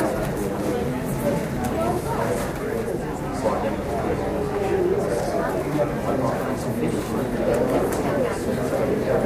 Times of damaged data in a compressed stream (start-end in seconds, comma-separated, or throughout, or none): none